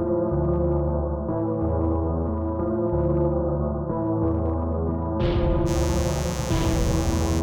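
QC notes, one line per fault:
5.65–7.42 s, mains buzz. A steady, raspy buzz enters under the music and runs to the end. Sharp switching spikes at twice the 60 Hz mains rate leak in, so harmonics stack up into the kilohertz range. It sits fairly loud, roughly 10 dB below the music.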